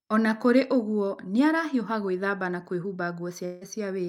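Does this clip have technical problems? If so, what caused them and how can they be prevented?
Yes. A long network dropout runs from 3.45 to 3.63 s, just after "arahiũha gwĩthamba na kwĩhumba". About 160 ms of speech never arrives. The receiver stretches the last sound into a fading buzz across the gap, and the speech resumes with that part missing, likely from packets lost in transit. A more stable connection, or a larger jitter buffer with forward error correction, would prevent it.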